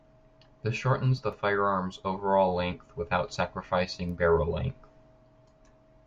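A short speech recording with nothing technically wrong to report. No faults can be heard anywhere in it.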